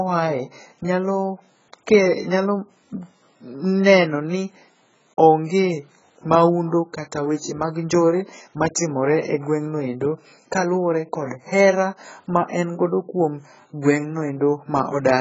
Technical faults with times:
0.00-15.21 AAC compression

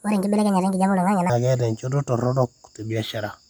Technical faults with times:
0.00-1.30 section at the wrong speed

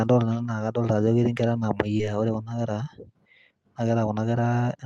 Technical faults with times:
1.97-2.03 short concealed packet loss

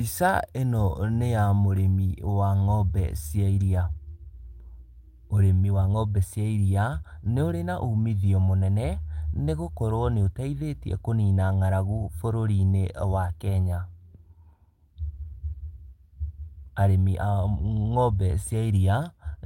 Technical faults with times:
none

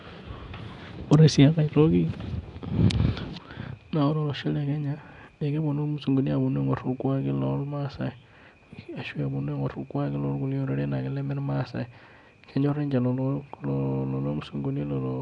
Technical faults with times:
0.00-15.22 Nellymoser compression

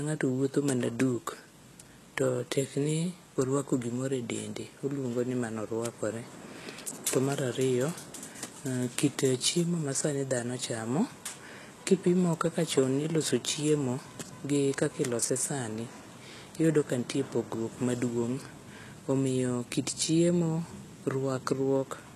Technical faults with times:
0.00-22.16 HE-AAC compression

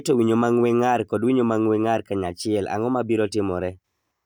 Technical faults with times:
none

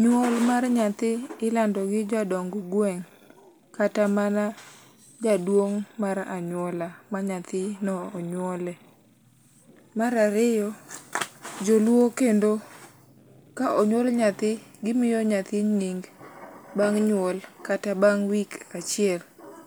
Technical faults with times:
none

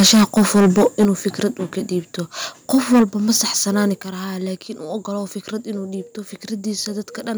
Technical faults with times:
0.00-1.05 microphone overload
1.05 microphone volume stepped down
2.74-3.04 microphone overload
3.02 microphone volume stepped down
4.02 microphone volume stepped down

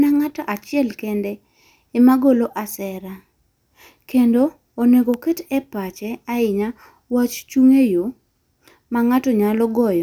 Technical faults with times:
5.14 electrical switching spike

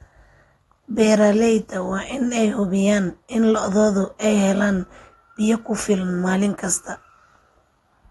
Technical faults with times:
0.00-8.11 AAC compression

